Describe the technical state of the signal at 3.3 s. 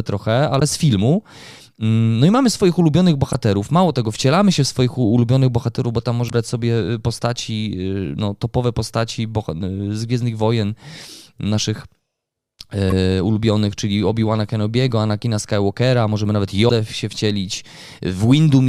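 At 3.33 s, just after "i mamy swoich ulubionych", there is damaged data in the compressed stream: corrupted bytes make the decoder misread a frame and lose sync, so a brief glitch is heard as it locks onto the next valid frame header.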